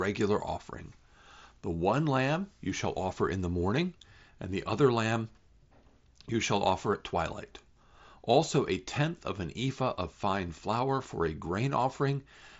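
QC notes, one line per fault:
No faults found.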